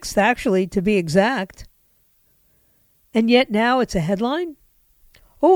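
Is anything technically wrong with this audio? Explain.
No, nothing in this speech recording stands out as a technical problem, so there's nothing here to flag.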